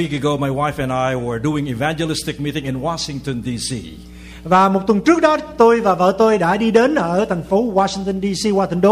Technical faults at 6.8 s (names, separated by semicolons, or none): hard clipping